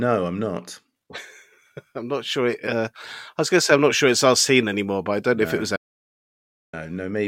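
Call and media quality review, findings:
Audio dropout to silence, 5.77–6.73 s, right after "no if it was": sound cuts mid-flow, 0.97 s of silence with no room tone, then resumes, unlike gating or loss concealment. Likely input loss upstream while capture kept writing silence.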